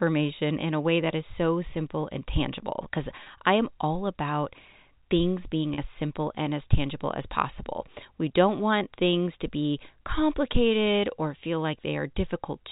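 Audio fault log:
3.24–3.26 s and 5.74–5.78 s: packet loss with pitch repetition. Each gap sounds like a brief held, buzzy sustain, about 20 ms at the first and 40 ms at the second, which fits one and then two lost 20 ms packets. The receiver filled each hole by repeating the last pitch period of the speech. Both gaps are too short for that repetition to fade into silence, so the sound stays frozen on one tone for an instant and then resumes, still band-limited by the G.711 telephone coding.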